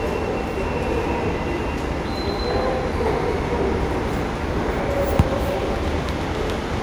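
No technical faults are audible anywhere in this recording of sounds.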